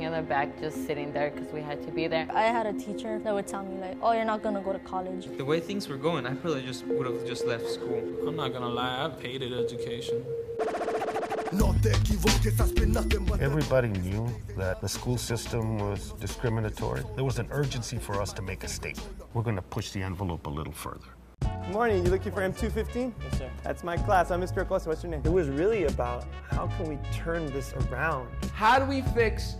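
No audible technical faults appear anywhere in this recording.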